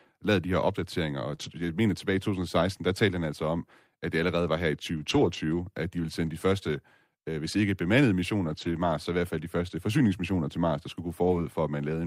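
A brief smear at 1.35 to 1.39 s in this speech recording is short concealed packet loss. About 20 ms of audio never arrived in time, and the decoder filled the hole by extending the preceding sound before blending back into the real signal. The passage running on from there to 1.49 s, between "de her opdateringer og" and "jeg mener tilbage", turns rough and grainy. So do 4.97 to 5.35 s between "allerede var her i" and "at de ville", 6.27 to 6.29 s, 8.49 to 8.71 s after "øh hvis ikke bemandede", and 11.23 to 11.37 s. Each is a lost packet rebuilt from error correction. The following packet carried a low-bitrate backup copy, so nothing drops out, but the stand-in is coarser and noisier. The longest stretch, 0.38 s, holds ten rebuilt 20 ms packets, 200 ms in all.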